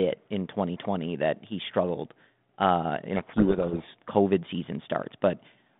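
From 3.16 to 3.85 s, after "he struggled uh in", a codec payload misread, with G.726 bits read in the wrong order, abruptly buries the speech in harsh distortion, not level-following hiss.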